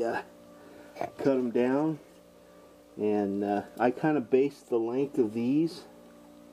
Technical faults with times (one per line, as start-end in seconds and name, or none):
none